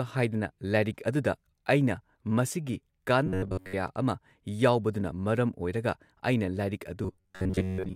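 From 3.26 to 3.74 s, just before "ꯑꯃ ꯌꯥꯎꯕꯗꯨꯅ ꯃꯔꯝ", and from 7.04 s to the end, robotic sound from repeated short buffers gives a metallic buzz fixed at 93.8 Hz. That is likely an 11 ms chunk replayed over most of the skipped audio. Unlike codec warble, the buzz stays at one rate.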